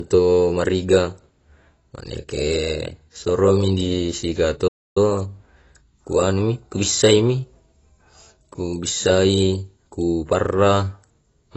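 From the first second to the last, the speech carries the dull, smeared sound of AAC compression, most likely AAC-LC at a low bitrate, which fits a rate around 24 kbps. The damage is plainly audible: sibilants turn fizzy and sustained sounds warble because the coder quantises each frame's spectrum coarsely. Nothing survives above a lowered cut-off. On a spectrogram that shows as a hard ceiling across the whole clip, with patchy gaps and blotches in the bands below it.

At 4.67 s, just after "soromi di sika", the sound stops dead for about 0.28 s until 4.97 s and then resumes. This is a playback stall, likely the player running short of data or having its output thread blocked, so it emitted silence until it caught up. It is heard as an abrupt hole in mid-flow. The waveform shows a flat, empty stretch, and the spectrogram shows a clean vertical blank band cutting across all frequencies.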